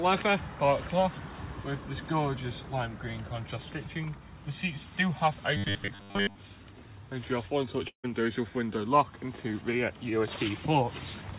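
Robotic sound from repeated short buffers, 5.57 to 6.36 s: most of the audio here is replaced by looped fragments, likely because audio arrived too seldom. This imposes a rigid 100 Hz metallic buzz, which fits a 10 ms repeat. Long network dropout, 7.88 to 8.06 s: about 160 ms of audio is lost. The receiver fills about 155 ms with a fading continuation, likely after a network gap, and 100 ms falls silent before the sound resumes.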